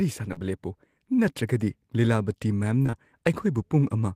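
Speech with short concealed packet loss: brief smears at 0.33–0.38 s and a longer run of three back-to-back gaps from 2.82 to 2.95 s, each about 20 ms of lost audio patched by extrapolating the previous sound. Spectrograms show smoothed, repeated harmonics or flat noise there.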